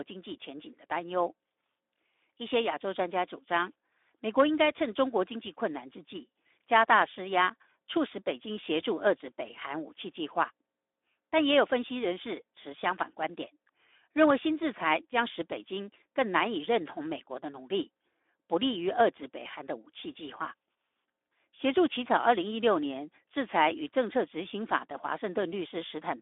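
The whole clip runs through the Speex codec. The speech is band-limited to roughly 300 Hz to 3.6 kHz, and the CELP coding is plainly audible as a noisy, hoarse texture. That points to a low-bitrate setting, somewhere around 11 kbps, with too few bits left for the excitation.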